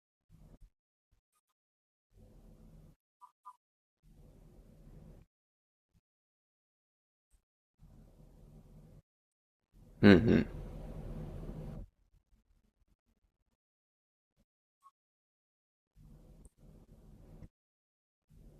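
Speech recording with no audible technical faults anywhere in the signal.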